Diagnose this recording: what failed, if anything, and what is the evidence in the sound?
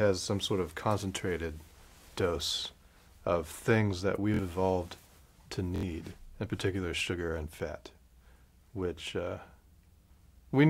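Driver-stage repeated buffer at 4.34 and 5.76 s: one 23 ms block replays two, then three extra times, seen as identical waveform copies with hard joins.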